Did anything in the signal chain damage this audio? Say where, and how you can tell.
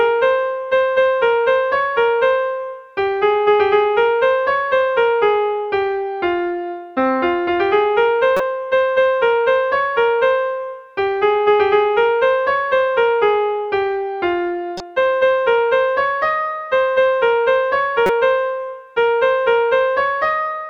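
Yes. Three short glitches break through the sound, at 8.37 to 8.40 s, 14.77 to 14.80 s and 18.06 to 18.10 s. The first and last peak at about -5 dBFS and the middle one at about -15 dBFS. This is a corrupt frame decoded at the codec stage. Flipped bits in each compressed frame scrambled its gains or spectral codes, and the decoder played it anyway. Energy landed at wrong frequencies for only one or a few frames' worth of time.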